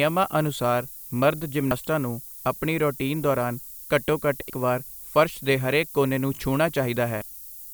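Throughout the speech there is a steady, thin hiss that climbs sharply toward the top of the band, sitting at about 15 dB below the signal. This is low bit depth with noise shaping. The level of the hiss points to quantisation at around 7 bits. The rounding error from that coarse quantisation is fed back so its energy is pushed upward in frequency, which keeps the lower band cleaner but leaves a bright, constant hiss over the whole clip.

On top of that, damaged data in a compressed stream causes three short disturbances, at 1.71 s, from 4.46 to 4.52 s, and at 7.22 s. At each point the decoder met corrupted bytes, misread or discarded the affected frames, and lost sync until it found the next valid frame header. The first and last are brief blips. The middle one lasts about 50 ms.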